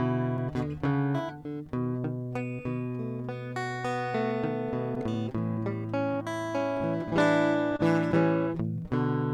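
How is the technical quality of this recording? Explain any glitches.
The music carries timing faults from a clock mismatch on the link, with a steady stretching of the material and one brief stall.

Clock drift between sender and receiver runs through the whole clip. The sending clock runs slow, by roughly 2 percent relative to the receiver, so audio arrives a little slower than it is played out. The jitter buffer keeps draining, and the receiver has to compensate continuously. This is heard as a faint unsteadiness in the pulse of the music rather than as any single distinct event.

Repeated timing corrections span 0.76 to 8.84 s. To stay in step with the slow sender, the receiver repeats short fragments, all in the same direction and at uneven spacing. The net effect is a playback speed of about 99 percent, with roughly a tenth of a second added over the stretch. Each edit is small, so the result is slight hiccups and a tempo that wavers.

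A short stall from a late packet occurs at 7.77 to 7.82 s. A packet missed its deadline and the jitter buffer ran empty. The receiver held the last sound for 24 ms until the packet arrived, then resumed from the same point, so nothing is lost. The delay grows by 24 ms at this point. It is heard as a momentarily sustained sound with a slight buzz or dip.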